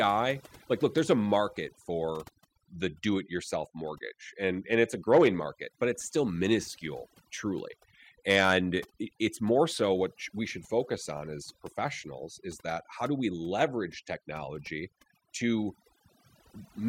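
Overdone noise removal affects the whole speech recording, from start to finish. A noise reduction stage set too aggressively pulls individual frequency bands down whenever they sit close to its noise estimate, and the quieter parts of the voice fall below that line too. Between phrases the background drops and breaks up into twinkling specks. Unlike a simple noise gate, which mutes everything at once, this works band by band, so the specks flicker in and out inside the silence.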